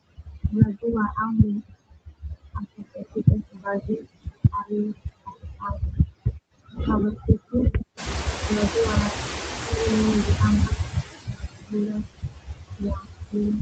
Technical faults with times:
0.00-13.62 noise suppressor artifacts
0.04-0.44 speech cut by the noise suppressor
1.62-6.79 speech cut by the noise suppressor
7.16-8.74 speech cut by the noise suppressor
7.97-10.75 noise suppressor catching up
9.14-9.72 speech cut by the noise suppressor
10.70-13.62 speech cut by the noise suppressor

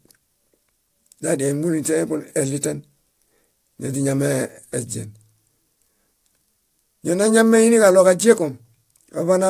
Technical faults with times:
0.00-9.50 aliasing

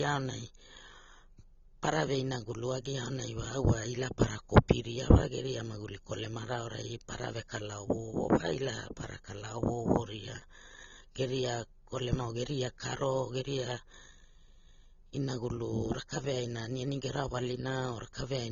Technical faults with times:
0.00-18.51 AAC compression

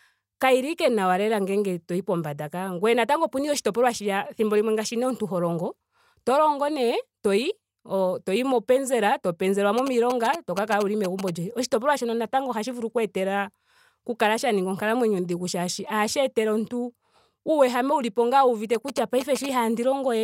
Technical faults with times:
9.78-11.30 GSM signalling bursts
18.75-19.46 GSM signalling bursts

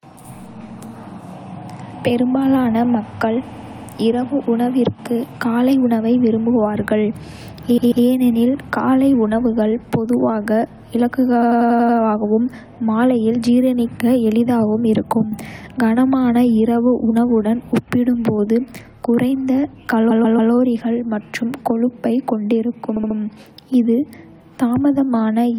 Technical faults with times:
3.52-3.87 repeated frames
7.77-8.05 repeated frames
11.41-11.97 repeated frames
20.10-20.52 repeated frames
22.95-23.16 repeated frames

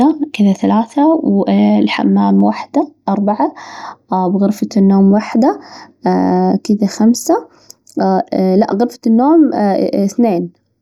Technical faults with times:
2.40-10.81 channel delay (comb filtering)

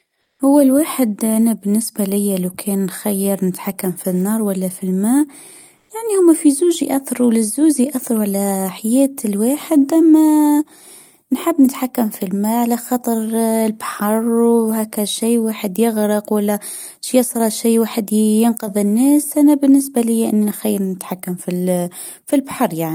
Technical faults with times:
0.21-0.39 comfort noise in place of the background
5.77-5.89 comfort noise in place of the background

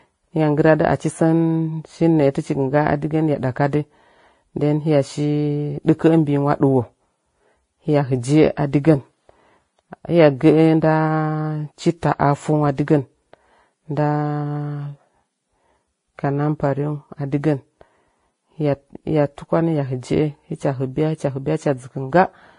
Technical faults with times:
0.00-22.58 transcoding between lossy codecs

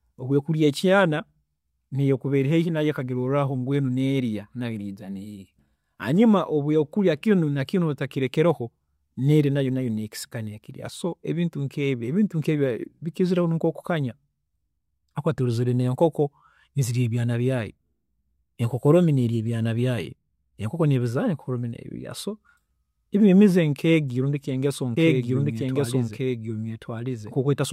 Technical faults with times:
24.97-27.72 doubled audio track

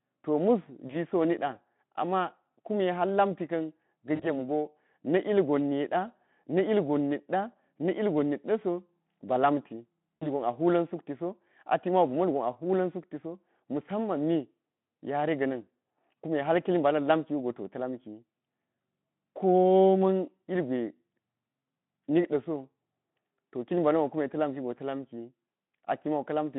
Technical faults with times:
0.87-0.96 VoIP packet loss concealed by the speech codec
4.15-4.38 VoIP packet loss concealed by the speech codec
10.16-10.26 VoIP packet loss concealed by the speech codec

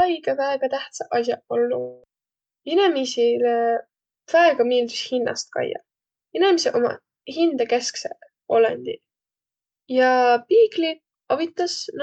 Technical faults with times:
1.79-2.05 long network dropout

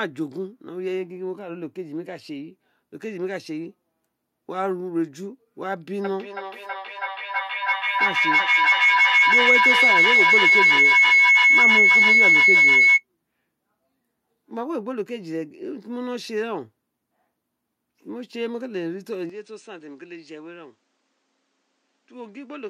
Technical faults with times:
6.04-13.05 feedback howl
19.30-22.69 input switched to a poorer device

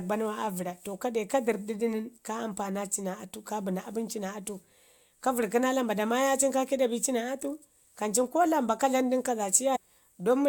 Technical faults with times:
9.75-9.77 stream segment skipped

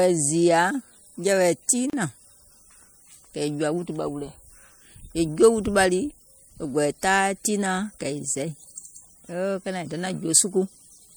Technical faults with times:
1.90-1.93 gap at a join of encoded pieces

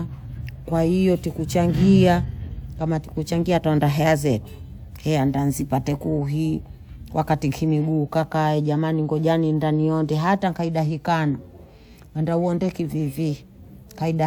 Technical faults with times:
none

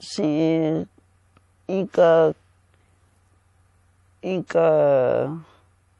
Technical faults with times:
0.00-5.99 MP3 compression

